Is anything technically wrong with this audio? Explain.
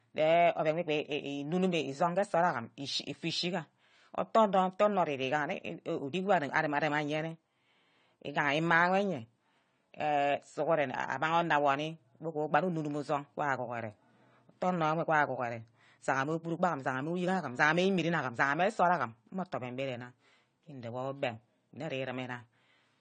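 Yes. Throughout the speech there is AAC compression damage, likely from AAC-LC encoding at a low bitrate consistent with about 32 kbps. The encoder lowers the cut-off and leaves gaps between bands, so the voice sounds dull and smeared, with warbling, fizzy sibilants.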